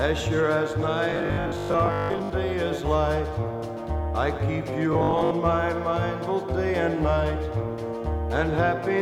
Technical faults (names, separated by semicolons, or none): robotic sound from repeated short buffers